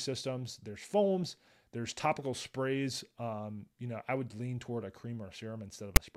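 A speech clip with one fault near its end: at 5.96 s a brief hard-edged burst of rasping static cuts in, which is file tags played as audio. A block of text metadata has been decoded as samples. Because text bytes fall in a narrow numeric range, the waveform shows a dense block pushed off to one side of the zero line, and the spectrogram shows a thin broadband vertical stripe with abrupt edges.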